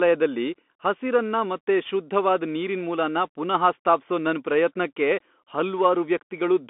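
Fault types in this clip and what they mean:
Bluetooth CVSD headset codec: one-bit up/down coding with an adaptive step squeezes the speech into 200 Hz–3.5 kHz, with nothing above 3.7 kHz and plainly audible grainy distortion.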